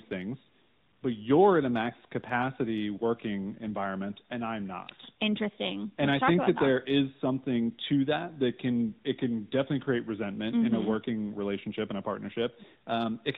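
Speech heard through the AMR narrowband mobile codec for its whole length: band-limited below 4 kHz, with plainly audible synthetic coloration that fits the 10.2 kbps mode.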